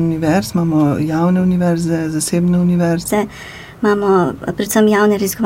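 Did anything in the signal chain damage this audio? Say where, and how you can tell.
Yes. From 3.08 s to the end is a section at the wrong speed: the sound runs 1.26 times fast and about four semitones high, with pitch and tempo rising together. A spectrogram shows every band stepping up at 3.08 s, and the waveform's events are compressed in time. The likely cause is a playback or editing stage clocking that part at the wrong rate.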